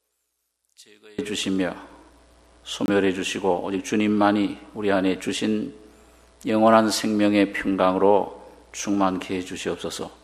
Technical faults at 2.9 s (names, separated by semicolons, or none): corrupt frame muted